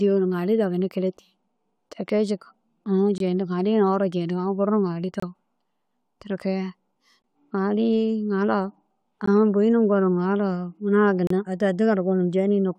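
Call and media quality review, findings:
Gap between stream segments: hard-edged silent dropouts in the speech at 1.17, 3.18–3.20, 5.20–5.23, 7.22, 9.26 and 11.27–11.31 s, each about 10–32 ms, recurring every 2 s. Segment timestamps don't quite abut, so the player pads silence. Nothing's actually missing.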